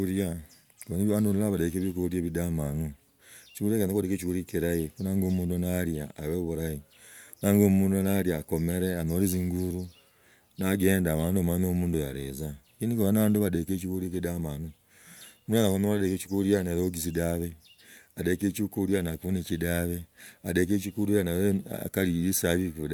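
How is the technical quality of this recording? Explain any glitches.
The technical quality of the recording holds up well, with no glitches to explain.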